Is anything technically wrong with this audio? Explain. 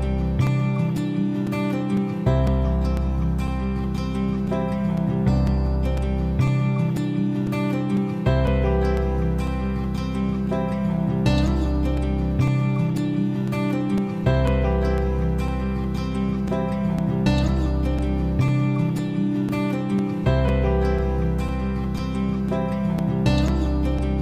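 Yes. Periodic USB or driver dropouts run from 0.47 s to 23.99 s: something stalls the audio path every 0.5 s, and each time a few milliseconds of signal vanish into silence. The result is a steady train of about fifty ticks, audible wherever sound is present.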